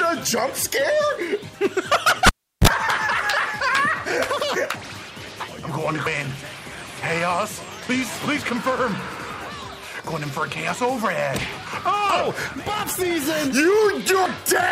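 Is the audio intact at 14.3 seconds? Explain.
No. Compressed frames are skipped at 14.26 s. About three frames, fitting a 32 ms frame length and around a tenth of a second of audio, were never played, so the sound jumps ahead.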